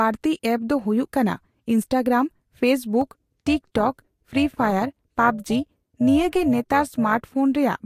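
From 3.01 s to 7.30 s the speech carries overlap-add ripple. The signal was split into windowed frames and rebuilt, but the overlapping windows do not add up to a steady gain. So the level dips and swells once per frame, by about 6 dB. That happens around 400 times a second. It sounds like a metallic buzz laid over the speech, with extra tones around each sound.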